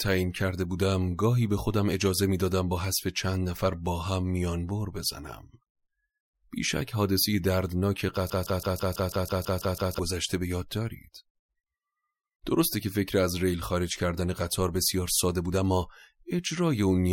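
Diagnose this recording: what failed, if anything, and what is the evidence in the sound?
The failure is a broken-record loop in the speech from 8.30 s to 9.99 s: a fragment of about 164 ms plays ten times back to back, giving a rhythmic stutter near six repeats per second. On a waveform the same envelope shape tiles exactly. On a spectrogram an identical block of harmonics recurs at even spacing. The likely cause is a playback or streaming stage that stalled and kept resending its last buffer, so the audio due in that span is gone.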